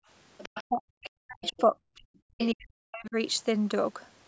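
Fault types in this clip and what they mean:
Background gated by the echo canceller: In the first 0.08 s the room sound falls away sharply, dipping by about 32 dB for roughly 70 ms before coming back. The canceller clamped the microphone while its loudspeaker was active, then released it. Unlike a packet dropout, the silence is not a hard cut in the signal. It is the ambience being pulled down and restored as the suppressor opens again.
Other side's voice leaking through: A faint second voice surfaces at 0.38 to 0.64 s, 1.43 to 1.61 s and 2.39 to 2.47 s. It sits around 15, 25 and 20 dB below the main speech, and arrives in brief scraps rather than as a steady layer. The likely cause is residual loudspeaker echo that the canceller failed to subtract. Room reverberation would trail the talker's own sound, but this is a separate, unrelated voice.
Speech suppressed in double talk: From 0.67 to 3.16 s the talker's speech repeatedly sinks, losing level in pieces for roughly two seconds in total. 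At its deepest it drops by something like 40 dB. This likely happens because both sides spoke at once and the canceller, unable to separate them, turned everything down. Background gating dims only the room sound. Here the talker's own speech is eaten away while the far side is active.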